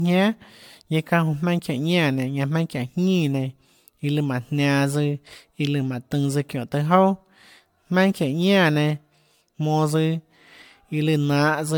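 Generation loss runs through the whole speech clip. It was likely caused by repeated MP3 re-encoding, about seven passes near 100 kbit/s. Each pass requantised on a shifted frame grid, so the sound turns swirly and hollow, attacks blur, and nothing remains above 19.9 kHz.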